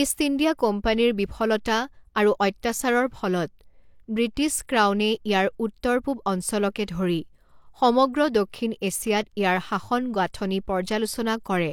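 From start to finish the speech carries the smeared, swirly texture of heavy lossy coding, yet the spectrum runs cleanly up to 18.5 kHz before stopping. This is likely low-bitrate audio saved at a high bitrate, with the damage pointing to something like 40 kbit/s HE-AAC that was later re-encoded as 320 kbit/s MP3, which cannot restore what was lost.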